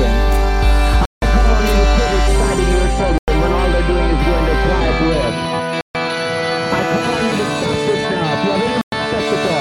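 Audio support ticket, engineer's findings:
Music drops to dead silence at 1.05 s (0.17 s), 3.18 s (0.1 s), 5.81 s (0.14 s), 8.81 s (0.11 s), then resumes. Likely Bluetooth stall: buffer ran dry awaiting resent packets. Waveform shows flat gaps; spectrogram shows full-band blank columns.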